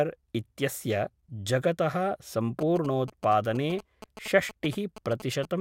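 From 2.61 s to 5.45 s there are GSM signalling bursts: a nearby 2G phone handshaking with its network, its radio pulses rectified by the audio circuitry. You get that galloping dit-dit-dit of short 217 Hz buzzes, sitting about 15 dB under the speech.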